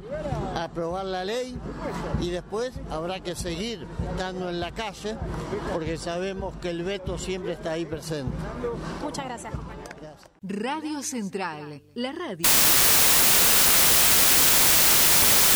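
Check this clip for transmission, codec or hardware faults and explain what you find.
There is one fault, a wrong sample width, from 12.44 s to the end at 15.55 s. Data written as 32-bit samples are read as packed 24-bit ones, so bytes straddle sample boundaries and only some values keep the real top bits. The sound becomes loud noise with the original buried inside, slowed to 0.75 speed and lowered in pitch. That speed change sets it apart from a byte-order error, which garbles the audio without altering its timing.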